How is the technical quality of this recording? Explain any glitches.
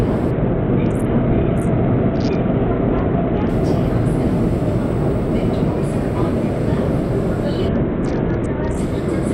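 Two stretches of degraded quality come from a Bluetooth SBC bit pool drop, at 0.31 to 3.49 s and 7.68 to 8.78 s. The encoder cut its bit budget, starving the upper sub-bands and coarsely quantising the rest, which fits a fall to around 66 kbps. The treble dulls and a gritty noise appears until the rate recovers.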